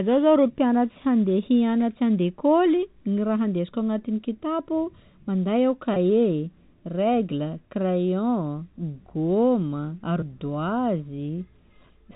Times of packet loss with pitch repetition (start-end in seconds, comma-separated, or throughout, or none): 5.94-5.96, 10.20-10.22